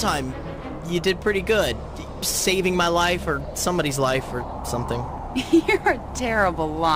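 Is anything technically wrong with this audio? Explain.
No, there's nothing technically wrong with this audio.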